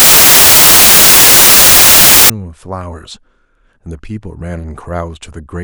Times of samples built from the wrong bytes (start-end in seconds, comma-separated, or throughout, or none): 0.00-2.30